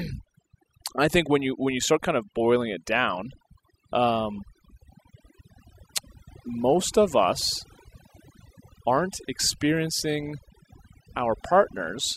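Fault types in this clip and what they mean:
Overdone noise removal: an over-aggressive denoiser kills bands near its noise guess, so pauses sit near-silent and sparkly.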